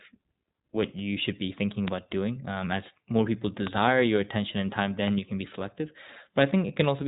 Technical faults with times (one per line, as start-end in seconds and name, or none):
0.00-7.08 iLBC codec
1.88-1.90 loud pop
3.67-3.69 loud pop
5.08-5.10 loud pop